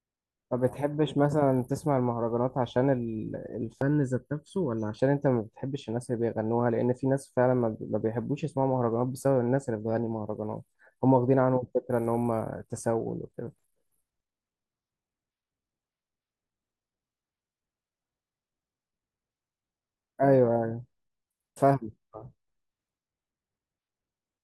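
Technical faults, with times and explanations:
3.82 to 4.99 s, channel delay (comb filtering): one channel of the speech lags the other by about 0.7 ms, and the two are summed to mono, so the sound turns hollow and phasey for about a second. The cancellation produces fixed notches starting around 700 Hz and repeating roughly every 1.4 kHz. A spectrogram shows evenly spaced dark horizontal stripes across that span.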